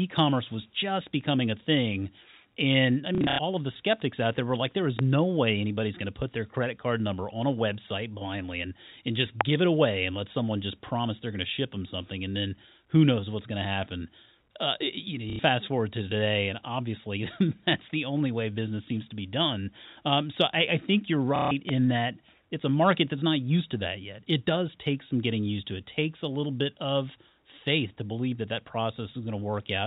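From 3.15 to 3.39 s there is packet loss with the last packet repeated. About 180 ms of audio is missing, scattered over 240 ms, with the longest gap 90 ms. The receiver fills each hole by replaying the previous packet. The gaps are multiples of 30 ms, which fits 30 ms packets. The repeats don't match the pitch of the speech. The longer run buzzes near 33 Hz, a brief robotic stutter.

At 4.99 to 5.01 s a loud pop cuts in, roughly 20 dB above the speech. It is a single sharp click lasting about 20 ms, and the speech continues beneath it. The likely cause is a sudden electrical transient, such as a switch, static or a driver glitch.

A second loud pop comes at 9.41 to 9.43 s. It is louder, roughly 25 dB above the speech. It is again a single sharp burst.

From 15.30 to 15.39 s the packet loss with repeated packets returns. This time 90 ms is lost in one stretch, about three packets. The replayed fragment makes a short buzzy stutter.

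From 21.36 to 21.51 s there is another packet-loss stutter. Here 150 ms of audio is replaced by repeats of the last good packet, about five packets. It is audible as a mechanical warble.

At 21.69 to 21.71 s, just after that stutter, a third loud pop lands. It is the quietest of the three, roughly 15 dB above the speech. It is still clearly a sharp thump over the sound.

Throughout the clip, the G.711 A-law telephone coding gives the familiar narrow telephone band, with nothing above 4 kHz.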